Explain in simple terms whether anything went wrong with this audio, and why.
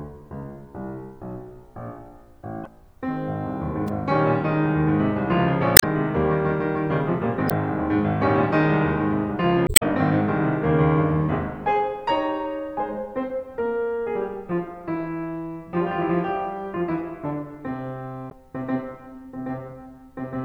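The music has several brief glitches from damaged data in a compressed stream. They fall at 2.63–2.67, 5.74–5.84, 7.47–7.52, 9.64–9.83 and 18.27–18.33 seconds. Parts of the file were broken, so the player lost its place. Each time it made a short chirp, squawk, click or gap.

At 3.88 seconds there is a sharp snap or a tight cluster of clicks. It sits on top of the music. This is likely an electrical switching spike, such as a nearby switch or static spark picked up by the audio line.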